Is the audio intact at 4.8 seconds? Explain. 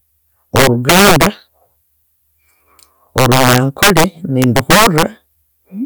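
No. From 4.42 to 5.03 s there's integer overflow: the speech is pushed about 7 dB past the integer limit, and instead of being capped, those peaks wrap around to the opposite sign. You hear harsh, violent cracks on the loud parts, far sharper than clipping.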